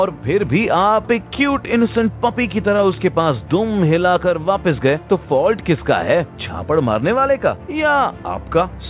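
Nothing goes wrong anywhere in the audio, which comes through a call path using G.711 A-law at 64 kbps, so the top end simply stops at 4 kHz, just as that codec always does.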